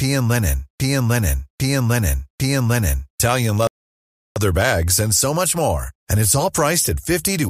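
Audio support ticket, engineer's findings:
Same 0.8 s speech segment repeating back to back from clip start, already under way, through 3.2 s, three repeats. Broken-record loop, likely stalled player or stream resending its last held fragment. Original audio for that span lost.

Dead silence 3.67 to 4.36 s, speech resumes exactly where it stopped. Rebuffering stall: player buffer emptied, playback paused awaiting download. No content lost; roughly 0.69 s added to timeline.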